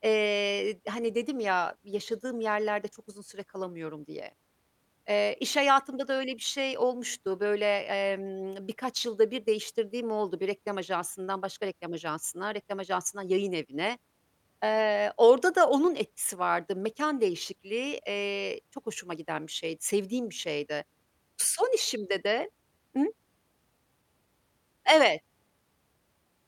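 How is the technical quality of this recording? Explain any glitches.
The recording has a steady timing problem that runs through the whole speech clip.

Clock drift between sender and receiver is present throughout. The sender's clock runs a few percent fast, so audio arrives quicker than it is played out and the receiver's buffer keeps overfilling, giving small recurring hiccups at uneven intervals.

Repeated timing corrections occur from 0.01 s to 26.26 s, keeping pace with a sender running at about 104% speed. To stop the buffer overflowing, the receiver repeatedly drops short slices of audio, heard as slight skips and an unsteady rhythm.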